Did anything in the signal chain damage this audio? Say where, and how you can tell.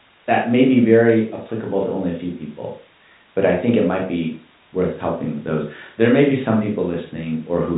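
No, nothing in the chain has damaged this speech; it carries the expected G.711 telephone coding, with the band stopping around 3.8 kHz as that format requires.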